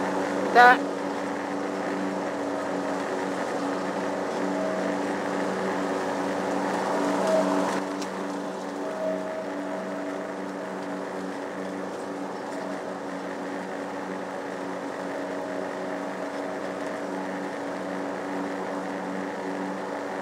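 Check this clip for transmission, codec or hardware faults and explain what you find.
One fault is audible: a sudden gain jump at 7.79 s that lasts to the end of the clip. The level drops by about 6 dB from one sample to the next, with no fade or ramp. The likely cause is a digital gain setting or a one-bit shift applied instantly in the signal path. Because the change happens in the digital domain, the sound and its background noise fall together, so the whole remainder of the clip sits noticeably quieter than the first part.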